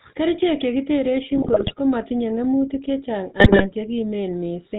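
Throughout, the speech passes through the GSM full-rate codec. Its vocal-tract model is driven by a thinned, pulse-like excitation at a rate that fits 13 kbps, with nothing kept above 4 kHz, so the voice sounds buzzy, gravelly and dull. From 1.35 to 1.73 s, ending just before "komatinye ng'emutik", GSM bit errors corrupt the decoder's filter, pitch and gain values frame by frame. The voice breaks into squawks, pops and gargling. The same GSM bit errors return from 3.40 to 3.66 s, with similar bursts of garbled, unstable sound.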